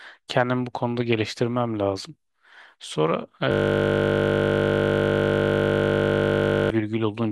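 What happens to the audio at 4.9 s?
At 4.9 s the speech is caught in a system hang loop running from 3.52 to 6.70 s. The system froze while the hardware kept replaying one 20 ms buffer. That slice repeats exactly, producing a steady 50 Hz buzz instead of speech.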